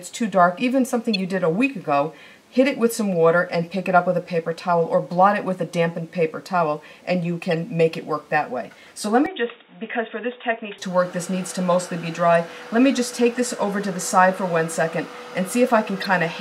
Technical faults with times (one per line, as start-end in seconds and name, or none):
1.14-1.16 corrupt frame decoded
7.51 corrupt frame decoded
9.26-10.78 input switched to a poorer device
16.00-16.06 corrupt frame decoded